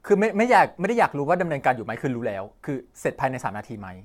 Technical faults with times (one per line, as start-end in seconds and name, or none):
0.00-4.04 generation loss